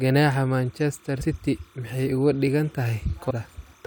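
Throughout the speech there is timecode bleed: a faint chirping warble, about 35 dB below the voice, flicking between tones near 1 kHz and 2 kHz. Linear timecode from a nearby track or cable has leaked into the audio. Its rhythm repeats at 30 frames per second, and the tone keeps switching between the two pitches. That distinguishes it from a steady mains hum or a single whine.

At 1.2 s the first compressed frames skipped event occurs. The audio jumps ahead by about a tenth of a second, which fits roughly four dropped codec frames of 21.3 ms each. At 3.29–3.31 s a second skip leaps forward about a fifth of a second, likely around ten frames. Unlike a dropout, nothing falls silent. Time simply lurches forward.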